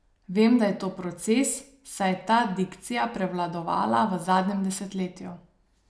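Listening closely to this short stretch of speech, nothing technical stood out as wrong at any point.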